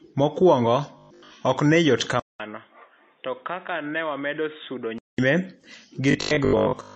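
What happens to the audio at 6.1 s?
From 6.11 s to 6.95 s the speech turns into a rigid, metallic buzz at 50 Hz, the robotic sound from repeated short buffers. New audio is likely arriving too seldom, so a 20 ms slice is looped in place of most of the real signal.

Underneath, the transcoding between lossy codecs runs through this moment too. Nothing is present above 8.8 kHz, and the artefacts of two codecs are heard together, which likely reflects a low-bitrate MP3 pass followed by AAC-LC.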